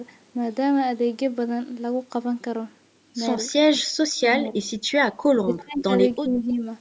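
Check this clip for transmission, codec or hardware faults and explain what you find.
Two faults turn up, both pointing to a call's echo canceller struggling while both sides spoke.

Speech suppressed in double talk, 4.4–4.55 s, 5.37–5.9 s and 6.15–6.65 s: the canceller likely mistook the local talker for loudspeaker echo and turned it down. The speech dips slightly at first, nearly cuts out around 5.4–5.9 s, then sags noticeably again.

Echo leak, 5.57–5.61 s: residual loudspeaker sound likely slipped past the canceller and was sent back, arriving 319 ms late. It is a faint, brief scrap, roughly 25 dB below the speech, buried inside the deepest suppression.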